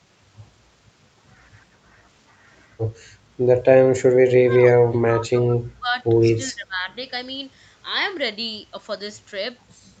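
From 4.36 to 6.03 s the speech is pulled down in patches adding up to roughly a second and a half, by as much as about 25 dB. This is speech suppressed in double talk, likely because the echo canceller mistook its own talker's speech, overlapping the far end, for echo. The waveform shows sudden hollows in the envelope, and the spectrogram thins to faint traces there.

At 6.46 to 6.52 s a brief echo leak surfaces. A scrap of earlier sound returns 369 ms late, about 35 dB below the speech, probably residue a loudspeaker-side canceller failed to remove. It is a faint smudge on the spectrogram, barely visible in the waveform.

From 6.51 to 6.88 s the same suppression recurs more lightly, dipping by up to about 15 dB over roughly 0.4 s, a shallower notch in the envelope.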